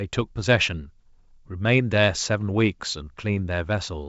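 No technical faults can be heard in this speech recording.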